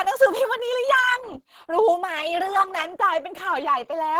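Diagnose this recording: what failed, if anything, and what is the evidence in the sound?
The failure is at the codec stage. Opus compression, likely at a low bitrate, affects the whole speech clip. Throughout, the voice sounds hoarse and muffled, with a rough, grainy texture rather than MP3-style swirl. That fits hybrid mode at around 16 kbps: a speech model handles the low band, and coarse band energies fill the top. On a spectrogram, energy reaches full bandwidth, but the upper bands look smeared and noise-filled, with few holes.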